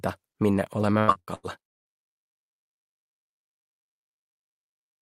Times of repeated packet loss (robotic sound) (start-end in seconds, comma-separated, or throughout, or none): 0.99-1.88